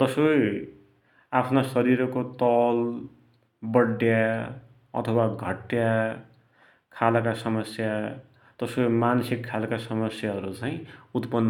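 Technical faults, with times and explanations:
No technical faults can be heard anywhere in this speech recording.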